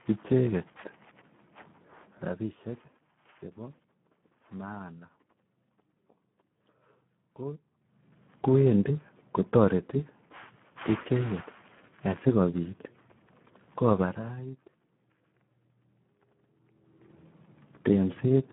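Throughout, heavy Speex codec damage makes the speech hoarse, noisy and near-robotic, which fits about 8 kbps, and nothing sounds above 3.8 kHz, unlike smoother, muffled low-pass filtering.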